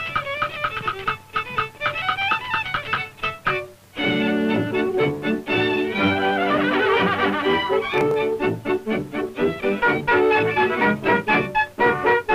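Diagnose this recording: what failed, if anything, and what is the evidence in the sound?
Processor overload crackle in the driver buffer, 7.94 to 8.14 s: a gritty tear of tiny skips suggesting sub-millisecond buffers, clustered rather than one isolated dropout.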